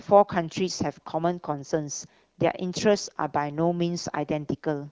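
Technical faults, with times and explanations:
Nothing stood out on listening to this speech, which comes through an AMR wideband (HD Voice) link at a rate high enough to keep it clear.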